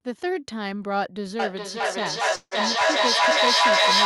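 From 1.39 s to the end there's feedback echo between two devices: speech loops back roughly every 0.4 s, and the repeats pile up to about 9 dB above the speech. At 2.35 s a call audio freeze stretches out the last sound for 160 ms, with 40 ms of silence, before resuming 0.18 s later with nothing lost, likely from packets held up in transit.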